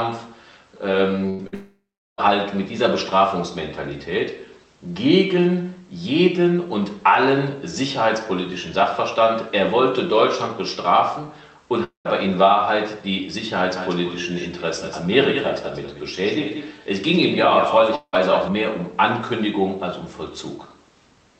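Burst of packet loss at 1.29 to 1.41 s and again at 1.47 to 1.54 s: roughly 100 ms and 60 ms of audio never arrived. The receiver stretched the last sound into a short, fading buzz or hiss, then skipped ahead.

Long network dropout from 1.54 to 2.20 s: a likely network gap swallowed about 640 ms. The concealed tail fades out and leaves about 370 ms of silence before the audio resumes further on.

Long network dropout at 11.84 to 12.07 s: about 220 ms went missing, likely from the connection stalling. It is heard as a brief fading fill, then roughly 140 ms of silence.

Doubled audio track from 13.76 to 18.48 s: a full-band second copy, about 10 dB quieter, trails by roughly 200 ms. It is likely a second capture path running late. The copy has no room colour and switches on and off abruptly.

Long network dropout at 17.95 to 18.15 s, within the doubled stretch: about 180 ms was lost, likely to a network interruption. 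It is heard as a fading fill followed by about 60 ms of silence.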